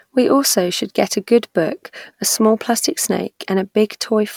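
No technical faults can be heard anywhere in the speech.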